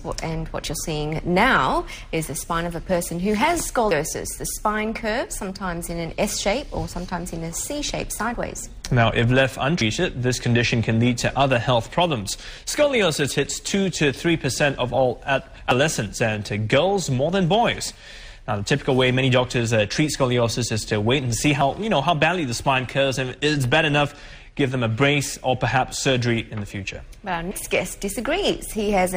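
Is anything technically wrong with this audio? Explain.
Yes. The audio skips at 3.91, 9.81 and 15.71 s, each losing about a tenth of a second. This is likely audio missing between chunks, with a gap at each 6-second chunk boundary.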